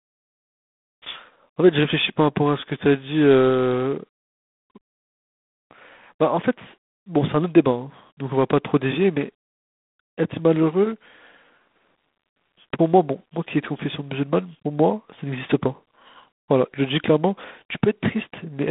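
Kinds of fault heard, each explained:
G.726 ADPCM: Samples are coded as coarse differences from a prediction. A harsh hiss follows the speech level, fitting 24 kbit/s. Nothing above 3.8 kHz passes.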